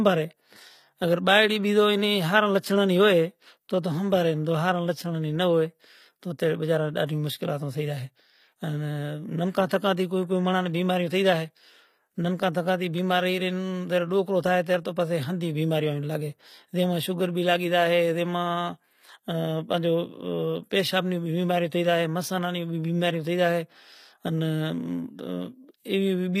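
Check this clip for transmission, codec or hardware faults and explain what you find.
The speech carries a codec fault from start to finish. Throughout, sibilants sound gritty and lispy, with a bright but unnatural treble, likely from HE-AAC compression at a low bitrate near 24 kbps: the upper band is copied from lower bands, so harmonics misalign. A spectrogram shows smeared, repeated-looking treble, with nothing above 15.5 kHz.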